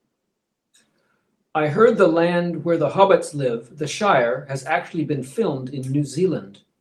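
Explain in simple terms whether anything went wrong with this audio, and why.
Nothing went wrong; no faults can be heard here.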